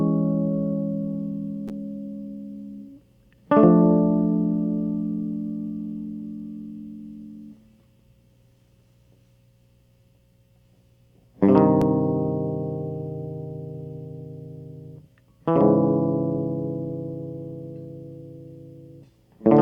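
Listening through this music, nothing stood out as a technical problem at any point.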